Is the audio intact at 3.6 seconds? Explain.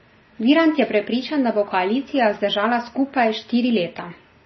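No. At 3.6 seconds, as throughout the speech, heavy damage from likely MP3 compression is audible. Starved of bits, the encoder has cut everything above 5.9 kHz, leaving a flat ceiling on a spectrogram, and zeroed weak lines flicker as watery, swirly holes.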